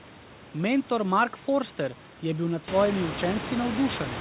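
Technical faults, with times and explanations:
No technical faults.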